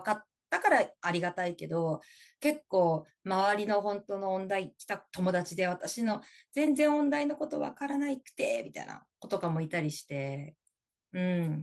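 No technical faults can be heard anywhere in the speech recording; the signal stays continuous and steady throughout.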